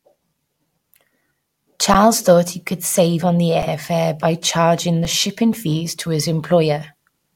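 The speech drops out briefly three times from an underrun with held sample, at 1.94 s, 3.62 s and 5.05 s, lasting about 11 ms, 5 ms and 4 ms; the first two fit 512- and 256-sample buffers. Each time the output buffer emptied and the converter froze on its last value, so the waveform runs flat and the spectrogram shows an empty gap. Live audio was lost meanwhile.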